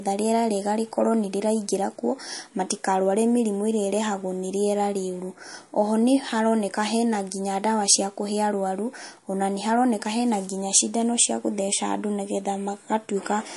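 Throughout the speech the treble stops dead at 11.3 kHz, and the sound has a clearly watery, swirling quality, with chirpy s sounds and softened consonant attacks. This is likely MP3 compression at a low bitrate, which fits roughly 48 kbps. Short of bits, the encoder drops everything above a fixed frequency and zeroes quieter frequency lines, which flicker on and off between frames. A spectrogram would show a flat ceiling at 11.3 kHz and patchy, blocky holes below it.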